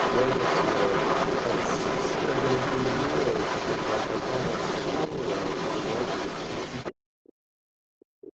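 Other side's voice leaking through runs from the start to 6.95 s of this speech recording. A second voice sits about 5 dB above the talker. The likely cause is the talker's device playing the far end on a loudspeaker, with the echo canceller failing to strip that playback from the microphone signal, so the remote talker returns down the line. Speech suppressed in double talk appears twice. At 5.1 s the talker's level dips slightly for about 40 ms. From 7.18 s to the end, the talker is pushed down almost to silence. Both points likely fall where the two sides overlap: the echo canceller could not separate the local voice from the loudspeaker echo, so it attenuated everything, the talker included. Throughout, the audio carries nothing above 8 kHz, which fits an Opus call path running at around 20 kbps.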